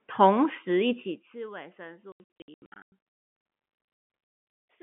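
From 1.00 to 1.38 s, zipper noise appears as the speech level drops by about 20 dB. The gain moves in 1 dB jumps with no smoothing between them, around a hundred steps a second. Each jump puts a tiny discontinuity in the waveform. Together they form a fine ticking, a zipping buzz that rides on the speech while the level falls. It stops when the level settles.

From 2.12 to 2.92 s, packet loss filled with silence chops the speech. About 520 ms of the 800 ms span is missing. The gaps are scattered, and the longest runs about 100 ms. The holes come in multiples of roughly 20 ms, which fits 20 ms packets. Each hole starts and ends abruptly.

The same fault returns from 3.76 to 4.56 s. About 460 ms of that 800 ms span is silent, and the longest gap lasts about 160 ms. The speech stutters through hard-edged dropouts.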